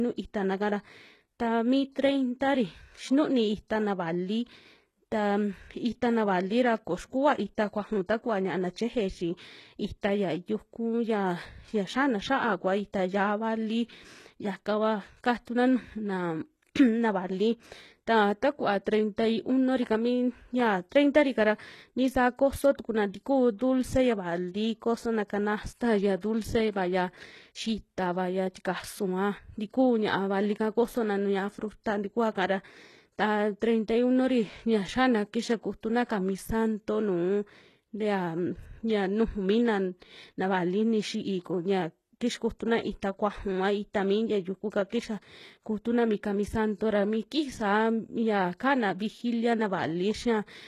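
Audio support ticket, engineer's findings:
Speech treble gritty and lispy throughout, s sounds metallic, nothing above 12.3 kHz. Likely HE-AAC compression, consistent with a roughly 16 kbps stream: treble rebuilt from copied lower bands, so harmonics misalign above the crossover. Codec damage plainly audible.

Brief hiss ahead of sharp attacks at 15.45 s (18 ms), 23.58–23.61 s, 26.21–26.23 s (22 ms each) and 44.90–44.92 s (28 ms), attacks smeared. Pre-echo from the transform codec: quantisation noise spread across the block fills the quiet lead-in.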